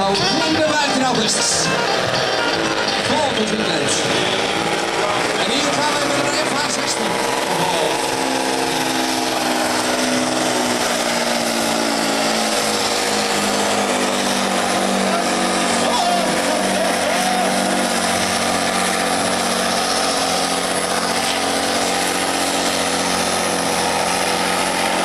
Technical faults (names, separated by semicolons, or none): none